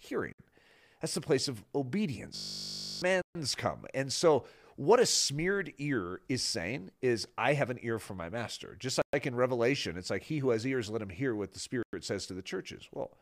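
Speech drops to dead silence for 58 ms at 0.33 s, 134 ms at 3.22 s, 117 ms at 9.02 s and 103 ms at 11.83 s, just after "him hear what the". These are likely Bluetooth stalls, where the headphone buffer runs dry while delayed packets are resent. Each shows as a flat gap in the waveform and a clean vertical blank band in the spectrogram.

From 2.36 to 3.02 s, a system hang loop replays one 20 ms slice about 33 times, giving a steady 50 Hz buzz, and roughly 0.7 s of speech is lost. The spectrogram shows horizontal harmonic stripes spaced 50 Hz apart, and the waveform shows an identical repeating cycle.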